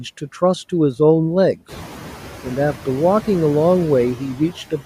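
Noise suppressor artifacts run through the whole clip: the suppressor pulls steady background down by about 5 dB frame by frame, so the noise dips between words and swells back under them. On a spectrogram the noise floor darkens in pauses and thickens beneath each word, and the room noise that climbs by about 14 dB around one and a half seconds keeps pumping the same way, settling about 15 dB under the speech.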